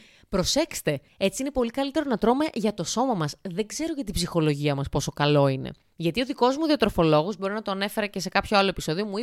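Nothing in this bit of speech trips any alarm for me; I couldn't point to a single technical fault anywhere in it.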